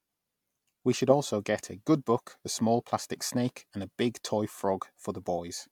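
No technical faults can be heard anywhere in the speech recording, and the signal holds steady throughout.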